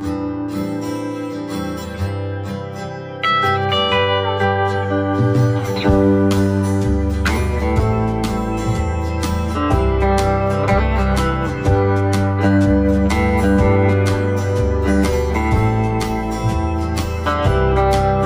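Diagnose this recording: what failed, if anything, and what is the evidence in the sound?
Channel delay (comb filtering) runs through the whole recording, from the driver or buffer stage: one channel trails the other by around 10 ms before a mono fold-down. Shared content cancels near 50 Hz and at evenly spaced notches above it, leaving the sound hollow and phasey.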